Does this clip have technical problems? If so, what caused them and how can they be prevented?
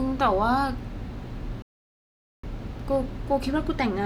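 Yes. At 1.62 s the speech cuts off in mid-flow and the output falls completely silent for about 0.81 s, picking up again at 2.43 s. This is a playback stall: the player most likely ran out of buffered data, or its audio thread was blocked, so nothing reached the output until it recovered and resumed. Giving the player a larger buffer and keeping its audio thread free of blocking work prevents such gaps.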